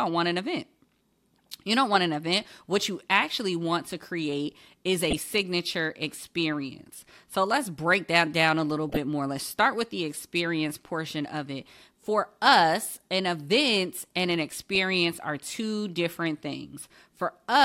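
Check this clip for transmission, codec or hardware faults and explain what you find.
Three short bursts of corrupt frame decoded. They occur at 5.10 to 5.18 s, 8.89 to 8.97 s, and 14.75 s. Damaged compressed frames were decoded anyway, putting energy at wrong frequencies. Each sounds like a chirp or noise blip spanning a few frames. The first is loudest and the last is quietest.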